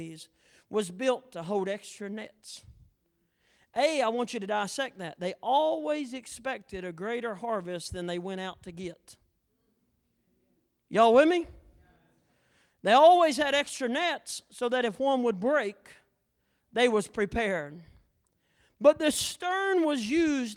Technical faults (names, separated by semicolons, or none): none